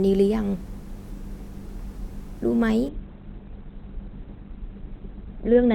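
Adaptive stream at a lower bitrate, from 2.89 s to the end of the clip: the speech abruptly loses its upper range, with nothing above 4.2 kHz, and takes on a thinner texture with stronger codec artefacts, yet there is no gap or dropout at the switch. The player moved to a lower-quality version of the stream after the connection slowed, and the sound points to a step from around 64 kbit/s Opus down to about 12 kbit/s.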